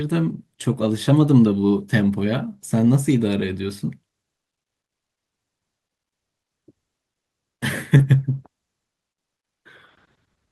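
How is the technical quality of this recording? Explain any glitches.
The recording has two closely linked glitches, both just before 8 s.

From 7.97 to 8.01 s there is a brief smear: short concealed packet loss. About 20 ms of audio arrived too late, and the receiver extended the preceding sound for 18 ms before blending back.

From 7.99 to 8.01 s the sound turns rougher and noisier for 20 ms. This is a lost packet rebuilt from error correction, where a low-bitrate backup copy stood in for the missing packet.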